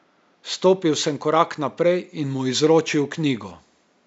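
Nothing stood out on listening to this speech recording, with only a faint room background sitting about 43 dB below the speech.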